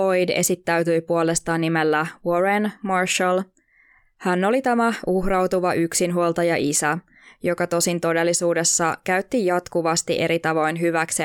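No audible technical faults anywhere in this speech recording.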